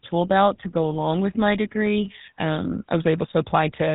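From start to finish the speech carries GSM full-rate codec damage: a buzzy, gravelly roughness from pulse-excited vocal-tract modelling, nothing above 3.8 kHz, consistent with 13 kbps coding.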